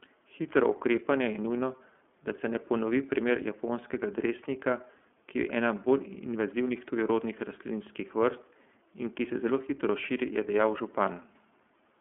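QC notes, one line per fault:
throughout iLBC codec: speech rough and synthetic, band-limited to 200 Hz to 3.4 kHz; spectrogram shows a hard top edge, blocky 30 ms frames, fitting 13.33 kbps.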